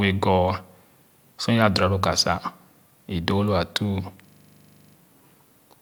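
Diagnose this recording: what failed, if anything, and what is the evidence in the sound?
A system hang loop at the driver or buffer stage: from 4.28 to 4.96 s a 40 ms slice of speech repeats 17 times, a steady buzz at the 25 Hz loop rate. The driver froze while the hardware kept replaying its ring buffer, so little audio is lost. The waveform shows identical 40 ms blocks, and the spectrogram shows vertical stripes at that spacing.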